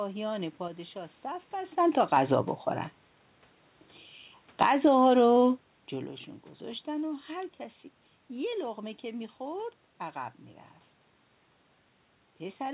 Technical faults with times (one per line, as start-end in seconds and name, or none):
0.68-2.16 sudden gain jump
4.47-4.82 automatic gain falling
4.73-5.59 automatic gain rising